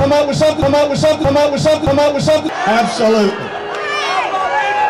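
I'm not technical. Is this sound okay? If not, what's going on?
No. From the start to 2.49 s, a broken-record loop repeats one 0.62-second fragment three times, likely from a stalled player or stream, losing whatever should have played.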